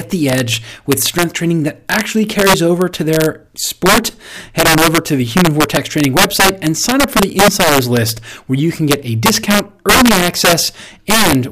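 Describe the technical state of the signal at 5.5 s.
At 5.5 s, as throughout the speech, integer overflow is present: the signal is driven about 9 dB past the integer limit and, instead of being held there, wraps to the opposite sign. Around two percent of samples flip this way, producing violent cracks on loud peaks, harsher than clipping.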